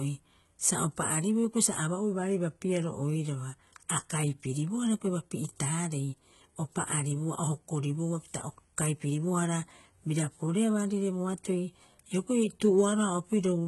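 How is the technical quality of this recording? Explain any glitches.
Quality is poor because of heavy codec damage running through the whole recording.

HE-AAC compression, throughout: the treble sounds synthetic and nothing reaches above about 11.8 kHz, which is likely the result of HE-AAC v2 at a very low bitrate, around 16 kbps. The lower spectrum is coded directly, while the upper band is rebuilt by copying lower content upward under a coarse envelope. That treble is mismatched with the real harmonics, so sibilants come out gritty, metallic or lispy across the speech.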